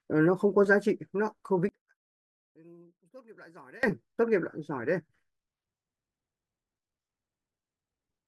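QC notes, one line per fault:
1.69–3.83 s, one channel inverted: when the speech is summed to mono it drops by about 26 dB. The centred voice and its low end nearly disappear, leaving only a faint trace of the difference between the two channels for just over two seconds before full level returns. The likely cause is reversed polarity on one stereo channel, so the content shared by both channels cancels in the mono sum.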